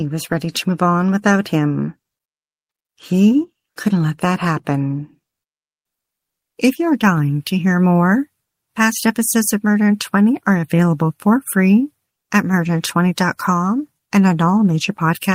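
Nothing stood out as a technical problem on listening to this speech recording.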